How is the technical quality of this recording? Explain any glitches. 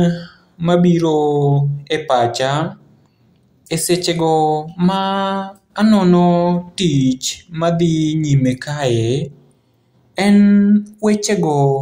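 The recording's signal holds steady throughout, with no technical faults audible at any point.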